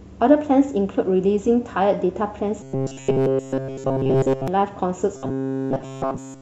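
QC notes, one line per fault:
2.61–4.48 s and 5.17–6.42 s: robotic sound from repeated short buffers. The speech becomes a rigid, metallic buzz fixed at 134 Hz, with almost nothing of the real signal getting through. This likely comes from new audio arriving too seldom and a fragment of about 7.5 ms being replayed to fill the gaps.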